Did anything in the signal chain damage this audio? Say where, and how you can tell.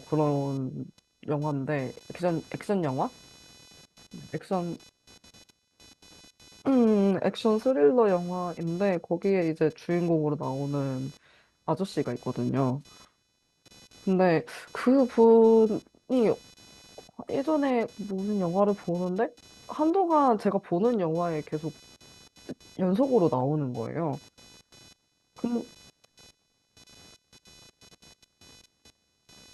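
Yes. Computer activity noise enters at the analogue wiring: a buzz pulsing at roughly 500 Hz, around 30 dB below the speech, persists throughout as processor load disturbs the shared ground.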